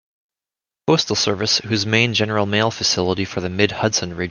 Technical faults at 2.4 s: none

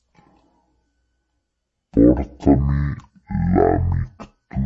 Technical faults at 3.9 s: wrong sample rate

